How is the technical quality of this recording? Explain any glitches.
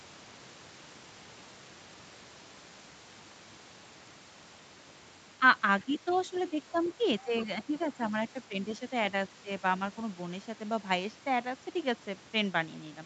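The recording has two recurring call-audio faults, clustered between 5.4 and 9.5 s, in speech that tops out around 8 kHz from the call path.

Speech suppressed in double talk occurs at 5.37–5.43, 5.85–7.75, 8.11–8.82 and 9.43–9.48 s. The echo canceller, likely confused by simultaneous talk, turns the talker down by about 5 to 10 dB. The dips sound like brief fades, and the waveform's envelope shows notches there.

The other side's voice leaks through at 5.8–6.4, 6.76–6.93, 7.39–7.44 and 7.77–8.11 s. Loudspeaker echo the canceller likely failed to remove sits about 20 to 25 dB below the talker, so it is faint. On a spectrogram it appears as weak, separate harmonic traces.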